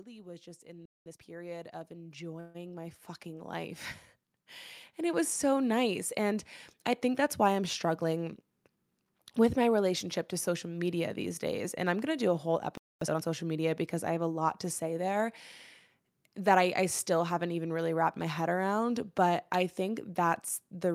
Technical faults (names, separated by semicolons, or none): automatic gain rising; playback stall; time-compressed catch-up; call audio freeze; jitter buffer speed-up